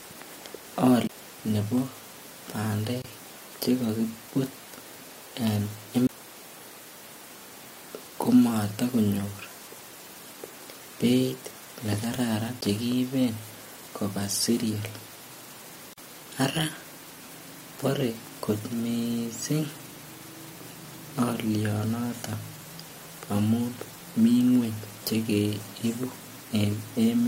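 Speech, interrupted three times by a CD skip: at 1.07 to 1.09 s just before "ne bo", at 6.07 to 6.09 s, and at 12.61 s just after "beit nekararan". Each is a brief mute of about 20 ms (about 10 ms at 12.61 s), and the sound resumes from a different point because the laser jumped to another turn of the disc spiral. Two gaps at a join of encoded pieces also appear: a 25.5 ms gap at 3.02 to 3.04 s ahead of "cheko kibut", and 43.7 ms at 15.93 to 15.98 s. Their edges are smeared, and the speech carries on where it stopped, which fits separately encoded segments being joined without trimming the encoder start delay and final-frame padding.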